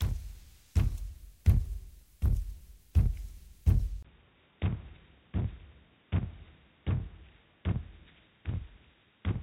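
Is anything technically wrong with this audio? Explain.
Yes. Input switched to a poorer device, from 4.03 s to the end: the capture likely moved to a different, lower-grade microphone or a headset's call profile. After a brief gap of about 20 ms, nothing remains above 3.8 kHz, so the sound turns dull and boxy. The level drops by roughly 5 dB, and a faint new noise floor, roughly 40 dB below the signal, sits underneath.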